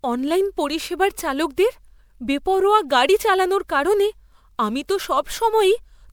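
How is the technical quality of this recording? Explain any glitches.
The recording is compromised throughout by one fault, generation loss.

Generation loss runs through the whole speech clip. The audio was likely decoded and re-encoded about four times with a lossy codec, with a character and bandwidth that fit MP3 at 128 kbit/s. Nothing remains above 20.8 kHz. Because each pass re-quantises on a shifted frame grid, noise and spectral gaps accumulate. The result sounds swirly and hollow beyond what that bitrate alone would produce, and consonant attacks are smeared.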